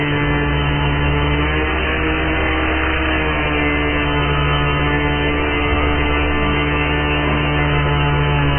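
From start to finish, nothing is heard above 3.1 kHz. The sound is dull, muffled and smeared, with heavy coding damage. The likely cause is AAC compression, AAC-LC at a very low bitrate, which fits about 12 kbps, discarding the upper spectrum.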